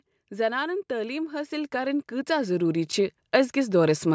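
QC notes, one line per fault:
0.88–2.98 s, automatic gain rising: the level creeps up by about 9 dB over roughly two seconds, with voice and background swelling together, because the call's gain control decided the input was too quiet and kept nudging its gain upward.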